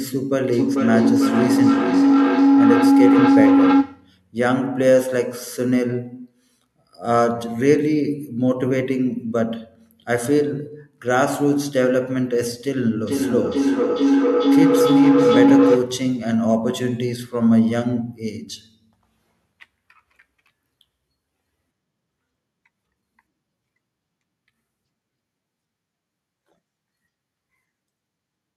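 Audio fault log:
0.53–4.23 s and 13.06–16.18 s, feedback howl: a tone near 300 Hz swells to about 4 dB above the speech. It pulses roughly every 0.4 s as a microphone-to-loudspeaker loop re-amplifies its own output. On a spectrogram, a narrow bright band thickens with regular beats. On the waveform, the envelope balloons.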